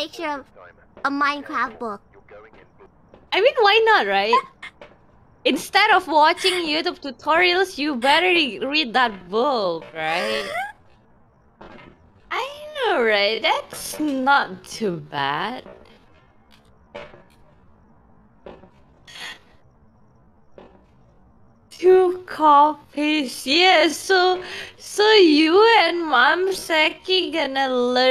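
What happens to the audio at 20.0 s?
At 20.0 s the audio sits inside a time-stretched section running from 9.06 s to the end, slowed to about 0.54× speed, likely by software repeating short pieces to hold pitch, so it drags while the pitch stays the same.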